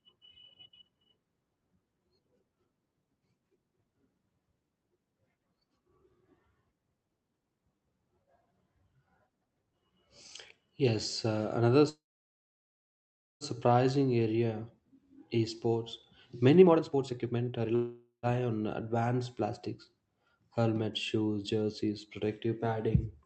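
At 11.89 s, right after "uh another", a call audio freeze opens a gap of about 1.5 s lasting to 13.44 s. Packets were likely delayed in transit, so the jitter buffer ran dry and the receiver had nothing new to play. It stretched the last sound into a brief fading buzz, then about 1.4 s of silence. When the packets finally arrived the speech resumed where it had stopped, so nothing is lost, just pushed later.

From 16.62 to 17.72 s a jitter buffer speed-up follows. The buffer had built up more delay than its target, so the receiver trimmed short pitch-period slices over and over, cutting roughly half a second. The speech plays at about 152% speed with unchanged pitch and sounds rushed.

A second call audio freeze runs from 17.75 to 18.26 s, just before "on advanced plastics". Again a likely packet delay starved the buffer, and about 0.48 s of filler is inserted, mostly a fading tail with about 110 ms of silence. 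The speech then continues intact. Throughout, the Opus call path limits the audio to about 8 kHz.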